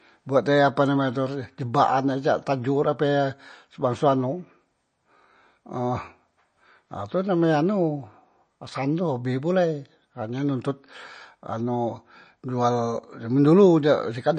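Speech, with MP3 compression damage plainly audible throughout: nothing is present above 9 kHz, and the sibilants and upper harmonics turn watery and swirly. That is likely a low-bitrate MP3 encode, consistent with roughly 34 kbps, dropping weak spectral lines frame by frame.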